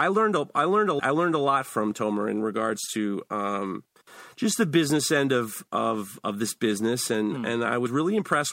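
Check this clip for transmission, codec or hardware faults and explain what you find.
There are two dropouts from compressed frames skipped in this speech. At 0.98 to 1.00 s, between "a I learned a" and "I learned a lot", roughly ten 26.1 ms frames vanish, so about 300 ms is gone. At 7.85 s, around four frames (about 100 ms) are lost. Either way, the audio jumps straight ahead.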